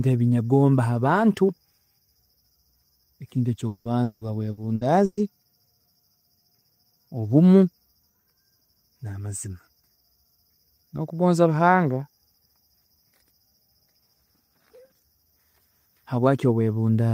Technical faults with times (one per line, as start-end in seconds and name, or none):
3.67-5.20 repeated packet loss (robotic sound)